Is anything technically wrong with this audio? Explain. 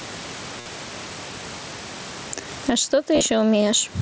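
Yes, there are three kinds of fault in this speech clip, carried over a wideband Bluetooth headset link whose band stops at 8 kHz.

Gain pumping runs through the whole clip. The level appears to be driven too hot into the microphone, so a fast limiter or compressor likely clamps down on every loud syllable, with a swing of roughly 15 dB. Loud and soft parts end up closer in level, flattening the dynamics. On a waveform the envelope looks squashed, with the gaps filling up. On a spectrogram the background brightens between syllables.

An audio dropout to a faint residue is already under way when the clip begins and lasts until 2.33 s. During that stretch the speech is lost and only a faint trace remains, around 35 dB below its normal level. The cause is likely a break in the signal ahead of a path that stayed live. The return at 2.33 s is abrupt, not a fade. The waveform is nearly flat before a sudden jump, and the spectrogram is almost empty.

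Concealed Bluetooth headset packet loss occurs twice. At 0.60 to 0.66 s about 52 ms of audio was lost. The receiver filled the gap by repeating the closest-matching piece of the last 20 ms or so, giving a buzzy held tone at full level. At 3.15 to 3.21 s about 45 ms went missing, scattered over 60 ms, with the longest run 22.5 ms. This one ends with a small warble where real audio returns. Spectrograms show evenly spaced repeated harmonic bands, and waveforms show periodic copies.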